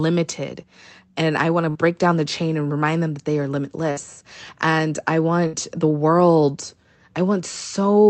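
A burst of packet loss on this speech call drops about 60 ms of audio three times, from 1.69 to 1.78 s (between "and I want to" and "down the chain and"), from 3.91 to 4.00 s (after "them that they are") and from 5.47 to 5.56 s (before "the world"). Each time the receiver stretches the last sound into a fading buzz or hiss, then jumps ahead. This happens over a wideband call codec, cut off above 8 kHz, consistent with Opus around 32 kbps.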